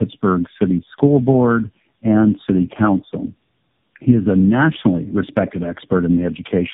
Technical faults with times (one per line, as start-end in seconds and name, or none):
0.00-6.74 tandem speech coding